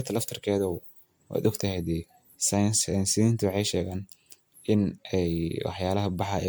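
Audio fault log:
throughout: generation loss. The speech has a swirly, smeared, hollow quality with blurred consonant attacks, far worse than its bandwidth suggests, since content extends up to a cut-off near 19.9 kHz, which fits MP3 at roughly 130 kbit/s. The likely cause is around fifteen successive decode-and-re-encode passes, each quantising on a shifted frame grid so noise and spectral holes stack up. A single low-bitrate encode would instead show a lower cut-off with cleaner transients.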